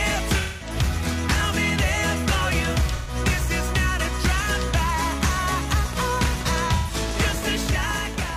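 From 0.39 to 0.76 s, and again at 2.95–3.15 s and 6.75–6.94 s, AAC frame loss with concealment leaves smeared, noisy, phasey patches of about 213, 128 and 128 ms. The decoder rebuilt the missing frames from the last good spectrum. These patches are blurred rather than sharp, and the step sizes fit roughly 43 ms frames.

From 5.86 to 8.31 s, a train of clicks runs at a regular 12.7 per second, around thirty similar ticks peaking roughly 10 dB above the audio. They are likely interference or a struggling interface.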